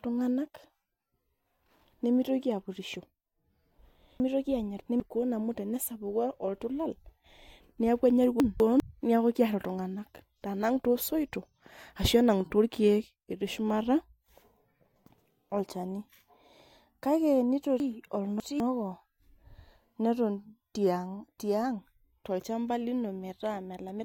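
Around 4.2 to 5.0 s there's a chunks-out-of-order glitch: a 200 ms block turns up three blocks late, so the speech jumbles. Same thing at 8.4 to 8.8 s, right after "neeku enya", one block late, and again at 17.8 to 18.6 s, three late.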